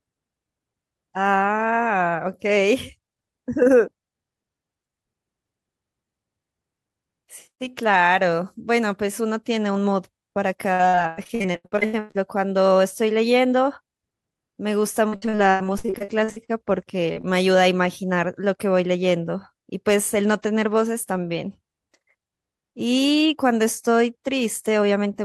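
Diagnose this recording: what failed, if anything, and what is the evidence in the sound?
The network dropped packets in bursts, and you can hear it as repeated packet loss with a robotic, choppy sound from 10.73 to 12.17 s and again from 15.09 to 16.51 s. The receiver kept stretching the last bit of sound over a quick run of holes, the longest around 0.1 s each. That concealment covers roughly half of the first stretch and over a third of the second, hence the chop.

There's also short concealed packet loss at 17.13 to 17.17 s and 17.21 to 17.25 s. Each is a single hole of about 20 ms on the network side. The decoder patched it by extending the previous sound and blending back in, so you get a quick smear or wobble rather than silence.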